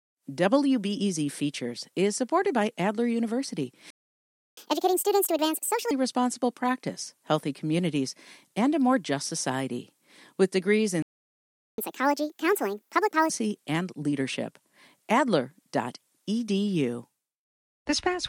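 At 3.90 s the speech cuts to silence for 0.67 s. This is a playback stall. The player likely ran out of data or had its thread blocked. From 4.57 s to 5.91 s comes catch-up at higher speed. The backlog plays at 1.5 times speed, with pitch raised roughly seven semitones. The sped-up stretch begins with "responsible practice healthy communities". The same pair repeats later. A second stall silences the sound from 11.02 s to 11.78 s, about 0.76 s. Sped-up catch-up follows at 1.5 times from "and leadership" until 13.30 s.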